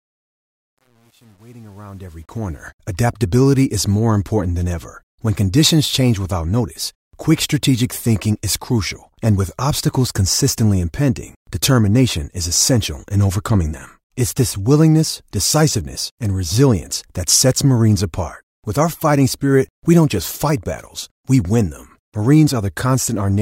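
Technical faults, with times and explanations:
0.00–2.69 s, truncation distortion on a fade: the fade-in before "adaptability is more important" is gritty, worst up to 2.18 s, consistent with a 9-bit undithered stage. Unlike steady hiss or gate chatter, the grit follows the level and clears as it rises.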